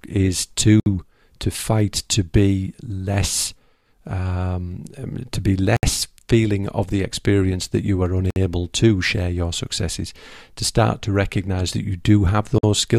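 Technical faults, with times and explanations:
0.80–0.86 s, 5.77–5.83 s, 8.30–8.36 s, 12.58–12.63 s: gap at a join of encoded pieces. The speech breaks for gaps of 62, 65, 57 and 51 ms, with smeared edges that leave the silent part shorter, then resumes where it stopped. Separately encoded pieces were joined with each encoder's start delay and end padding left in.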